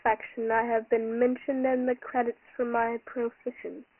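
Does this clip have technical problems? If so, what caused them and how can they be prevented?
Yes. Throughout the speech there is Dialogic VOX ADPCM damage. Nothing is heard above 3 kHz, and the low end thins out below about 250 Hz, which points to 4-bit OKI ADPCM at 6,000 samples a second and fits a 24 kbps stream. Each sample is coded as a coarse 4-bit step from a predicted value, so the step size lags behind fast changes in the waveform. This leaves a heavy, gritty hiss riding on the speech. To prevent it, record or export in 16-bit linear PCM at a higher sample rate rather than VOX.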